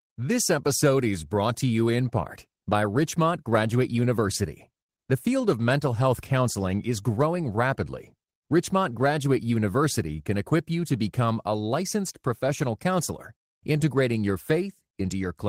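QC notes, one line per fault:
throughout: clock drift between sender and receiver. The sending clock runs about 1.5% slower than the receiving one, so the jitter buffer keeps draining and the receiver must keep patching the gap. The result is small timing hiccups that recur at uneven intervals.
0.06 to 15.04 s: repeated timing corrections. To stay in step with the slower sender, the receiver repeatedly repeats short pieces of audio, all in the same direction. This plays the sound at 99% speed and adds roughly a fifth of a second overall.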